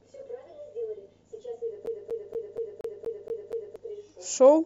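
From 1.86 s to 3.76 s the speech sticks like a CD stuck on one turn: a scratch keeps throwing the laser back, so the same 237 ms piece repeats eight times, each jump marked by a short mute. That steady, evenly spaced stutter separates it from irregular dropouts.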